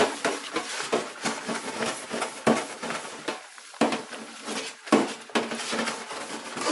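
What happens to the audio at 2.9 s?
At 2.9 s the sound carries MP3 compression damage, as it does for the whole clip. Nothing is heard above about 11.3 kHz, so the top end is cut flat. The likely cause is an encoder short of bits, at a rate that fits roughly 48 kbps. It drops the treble and zeroes weak frequency lines, which flicker between frames. The result is plainly audible: a watery, swirly texture, metallic chirps on bright sounds, and smeared attacks.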